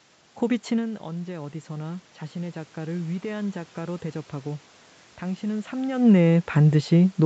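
Speech, with automatic gain rising from 0.84 s to 4.04 s. Around half a second in, the talker moves away and the input drops by about 12 dB. The gain control then climbs slowly by about 5 dB. Voice and room noise swell together.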